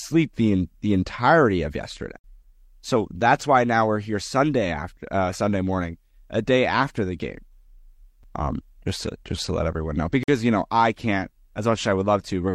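Mismatched timestamps between 2-second stream segments leave gaps the player fills with silence, a gap between stream segments that cuts hard-edged holes into the speech, with nothing lost: about 54 ms at 2.19 s after "the entirety of yesterday", a 6 ms blip at 8.23 s, and about 49 ms at 10.23 s between "to let everyone know" and "you know I can't".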